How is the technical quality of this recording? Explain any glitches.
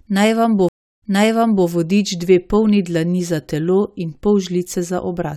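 The recording has one glitch, a stream reconnect between 0.69 and 1.67 s. Right after "vam bo" the sound cuts to silence for 335 ms. It then resumes 0.65 s earlier than where it stopped, so a short stretch is heard a second time before "vodič dve polni dlani". The connection dropped and the player went quiet. It then reconnected and started a fresh decoder mid-stream, and the server resent a burst from before the break, causing the backward jump.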